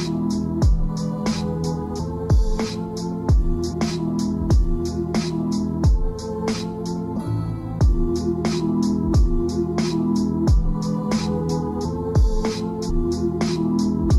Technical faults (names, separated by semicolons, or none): damaged data in a compressed stream